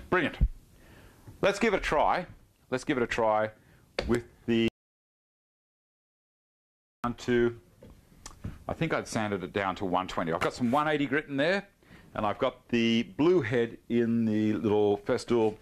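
At 1.77 s there is a case of compressed frames skipped: a stretch of roughly 50 ms never reaches the output, so the audio jumps forward mid-flow. On a spectrogram the harmonic or noise pattern shifts abruptly along a vertical seam. The waveform shows a discontinuity in its envelope.

From 4.68 s to 7.04 s comes an audio dropout to silence lasting about 2.36 s. The sound stops in mid-flow and returns just as suddenly. The gap is silent, with no room tone or noise floor at all. The likely cause is a lost input, such as a disconnected device, a failed link or an accidental mute, while the recorder kept writing silence. The waveform shows a flat line, and the spectrogram shows a solid black block across all frequencies.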